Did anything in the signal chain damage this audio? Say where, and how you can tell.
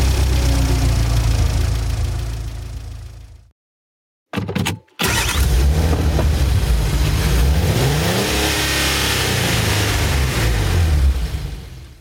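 Yes. Gain pumping runs through the whole clip. The gain ducks under each loud sound, a swing of roughly 20 dB. Loud and soft parts sit close together. The likely cause is input gain set far too high, with a fast limiter or compressor clamping down on every loud sound.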